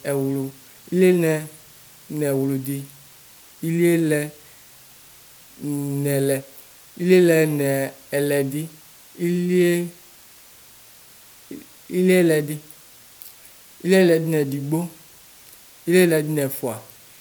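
From start to finish, the speech sits on a steady, even hiss, the mark of low bit depth with dither. The hiss fits roughly 8-bit audio where dither turned the rounding error into plain white noise around 30 dB below the voice, with no gritty distortion.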